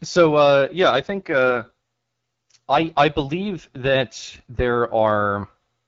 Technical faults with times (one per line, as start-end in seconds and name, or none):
0.66-4.56 AMR rate drop